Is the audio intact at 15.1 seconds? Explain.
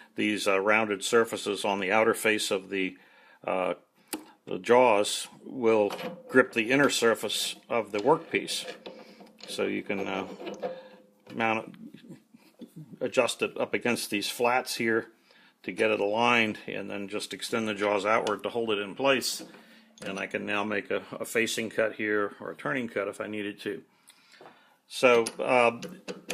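Yes, the audio at 15.1 seconds is intact, with no dropout, glitch or other technical fault at that moment.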